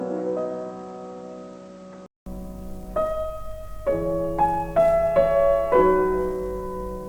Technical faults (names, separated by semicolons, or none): input switched to a poorer device